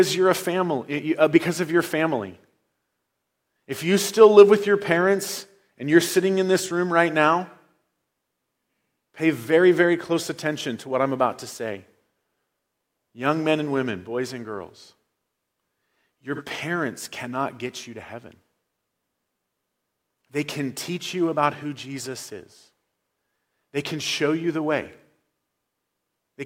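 At 16.35 to 16.42 s the speech briefly turns smeared and noisy, a phasey blur lasting about 43 ms before the clean signal returns. This is AAC frame loss with concealment. A gap this short fits a single lost frame. The decoder had nothing to play for that slot, so it rebuilt it from the last good frame's spectrum with scrambled signs or interpolated energy, which is why the detail smears out.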